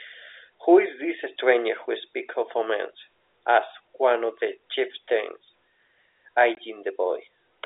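At 6.55 to 6.57 s, packet loss filled with silence: a run of packets never reached the receiver, and instead of concealing the gap it simply played nothing. The result is a 20 ms hole punched into the speech, which fits two 10 ms packets going missing together. Because the audio drops straight to silence and comes straight back, both edges are hard, with the band-limited G.711 telephone sound on either side.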